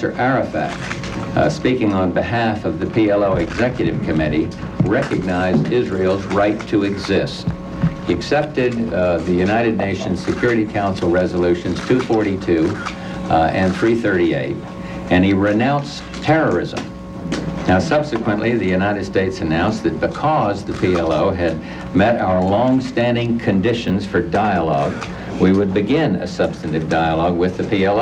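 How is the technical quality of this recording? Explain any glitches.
One glitch stands out, a brief scramble near the end. From 23.88 to 23.90 s there are chunks out of order. A 10 ms chunk of audio arrived one chunk late. It was played after the chunk that should have followed it. No audio is missing, but the sequence is swapped. That creates three hard joins where the waveform does not line up. You hear a tiny jumbled flicker, over in about 20 ms.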